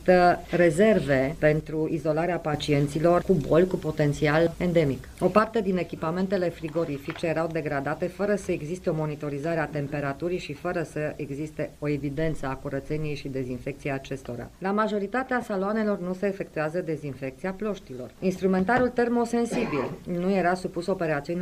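From 1.61 to 2.54 s the level drops abruptly by about 6 dB and then recovers, consistent with one channel dropping out, likely a lost stereo channel reaching the mono sum at half strength. The same drop returns at 5.39 s and lasts to the end. At 15.42 s a brief noisy smear replaces the sound, the mark of lost LE Audio frames: the LC3 decoder concealed the gap by repeating the previous spectrum with scrambled signs, which fits a single lost 10 ms frame.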